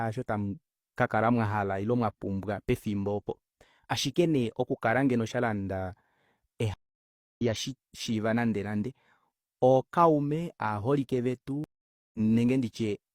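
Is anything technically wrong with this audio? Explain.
Yes. Two stream reconnects interrupt the speech, at 6.74–7.42 s and 11.64–12.20 s. At each one the connection dropped and the player fell silent, for 0.63 s and then 0.50 s, before reconnecting and starting a fresh decoder mid-stream. Playback resumes roughly half a second further on, so speech is skipped as well as paused. The first gap ends just before "shishiiva nande nande", and the second follows "ookaume aaholike".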